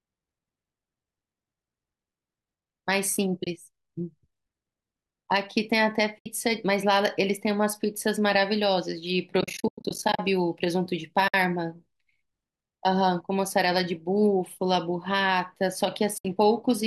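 Soft-edged dropouts interrupt the speech at 3.44–3.47 s, 6.19–6.26 s, 11.28–11.34 s and 16.18–16.25 s. From 9.41 to 10.19 s there is a stuttering cluster of gaps, the longest about a tenth of a second. This is AAC frame loss with muting. The decoder replaced the missing frames with silence, and the overlapping windows fade each hole in and out. The gap lengths fit the 10 ms frames of the low-delay AAC the clip likely uses.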